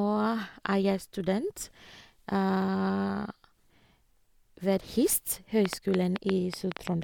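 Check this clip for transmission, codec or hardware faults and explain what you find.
One fault is present: a train of clicks near the end of the speech. It runs from 5.66 to 6.88 s. About ten clicks arrive at roughly 6.6 per second, unevenly spaced. Each is a short, similar pulse. They stand well above the speech, around 15 dB louder at their peaks. The likely cause is electrical interference from nearby equipment or a faulty connection or power supply injecting pulses. They sound like sharp, irregular ticking laid over the voice.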